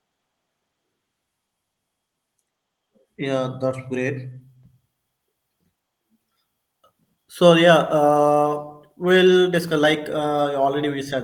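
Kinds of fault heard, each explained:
Call bitrate drop: the call's bandwidth estimate fell and the encoder was instructed to spend far fewer bits, going from 32 kbps down to 18 kbps. With that budget the codec quantises the speech more coarsely, so from about 7.88 s the voice turns rougher and watery, with less crispness in the upper range. It stays at its lowest for about 1.7 s before the bitrate climbs back, and the degradation ends by 10.39 s.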